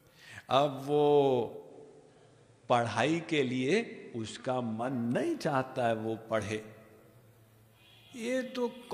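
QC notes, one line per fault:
1.52–4.93 s, digital radio blending to analogue: the receiver lost the digital stream and cross-faded over about 0.2 s to the station's FM broadcast, then returned. During that stretch a hiss sits far below the signal and the level drops by about 1 dB.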